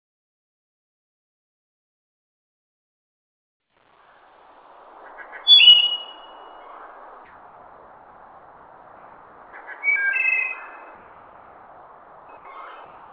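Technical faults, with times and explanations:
0.00–5.12 s, truncation distortion on a fade: as the smooth fade-in rises from silence, its quiet part breaks into gritty square steps, worst up to 4.42 s. Too few bits without dither, which fits about a 9-bit stage. Unlike gating, the grit tracks the fade level.
7.25–9.53 s, 10.95–12.29 s, 12.37–12.45 s and 12.85–13.12 s, comfort noise in place of the background: in the quiet gaps, about 35 dB below the loudest sound, the real background gives way to steady, featureless hiss about 3 dB quieter, likely synthetic fill from discontinuous transmission. Unlike dropouts, the gaps never fall fully silent.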